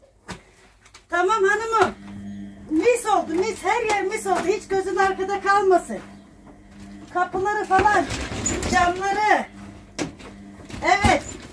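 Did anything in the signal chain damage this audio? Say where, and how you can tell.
No damage from the chain.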